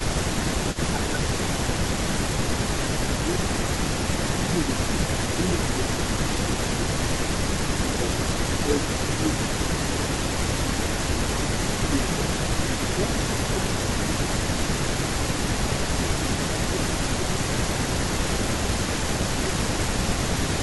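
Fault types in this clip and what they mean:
Speech suppressed in double talk: from 0.02 to 1.2 s and 1.8 to 20.39 s, the speech dips by up to about 15 dB, then about 10 dB, for roughly 11 s in total. This likely happens because an echo canceller, hearing both sides at once, turned everything down.
Echo leak: at 0.72 to 0.79 s, 14.45 to 16.42 s and 17.01 s to the end, a copy of the speech returns 183 ms late, about 15 dB and later about 10 dB below it, likely loudspeaker pickup that the canceller failed to remove.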